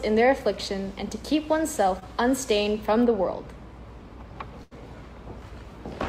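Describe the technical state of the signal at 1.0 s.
At 1.0 s the signal is intact, with no audible technical fault at that moment.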